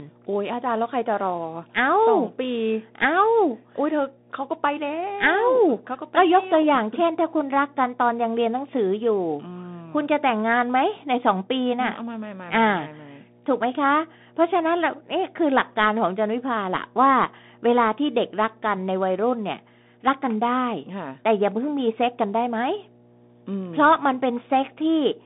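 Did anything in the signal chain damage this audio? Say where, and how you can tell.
Yes. Analogue wiring: mains hum runs the whole clip, a steady 60 Hz tone only about 15 dB under the speech, likely from a ground loop.

Codec: the Bluetooth CVSD headset codec squeezes the speech into 200 Hz to 3.7 kHz with nothing above 3.8 kHz, plus scratchy sibilants and granular hiss, which fits a 64 kbps link.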